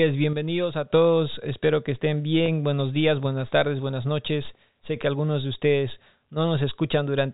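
One channel drops out from 0.33 to 0.90 s in this speech recording. The level falls abruptly by about 6 dB, as happens when a stereo pair is summed to mono and one side goes silent, leaving only the shared component, so a lost input channel is the likely cause. Packet loss with pitch repetition follows at 2.46 to 2.48 s. The receiver filled a 20 ms gap, which fits a single lost packet, by repeating the last pitch period, and it is heard as a brief held, buzzy tone within the telephone-band G.711 A-law sound, which stops at 4 kHz.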